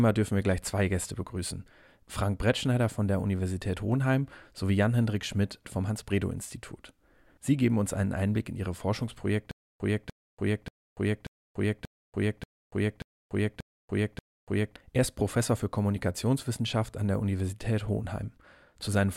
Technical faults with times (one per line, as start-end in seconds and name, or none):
9.51-14.76 stutter with silent gaps